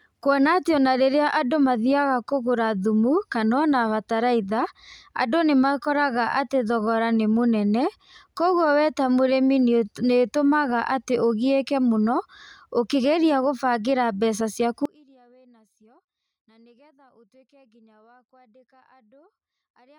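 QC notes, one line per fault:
14.85 s to the end: audio dropout to a faint residue. The speech cuts out abruptly mid-flow and does not return; for the rest of the clip, only a faint sound remains, roughly 35 dB below the signal's normal level. The onset is a hard break rather than a pause or a fade, and the path stays live afterwards, so the likely cause is a loss of the wanted feed upstream while the downstream chain kept running.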